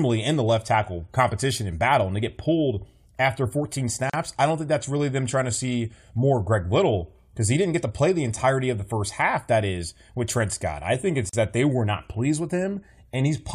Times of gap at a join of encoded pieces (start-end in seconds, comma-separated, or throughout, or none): 4.10-4.13, 11.29-11.33